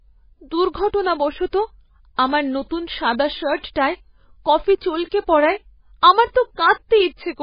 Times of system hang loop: none

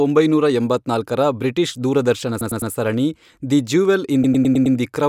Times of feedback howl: none

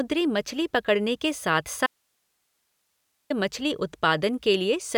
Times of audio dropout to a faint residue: 1.86-3.30

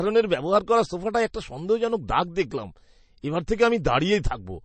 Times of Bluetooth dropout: none

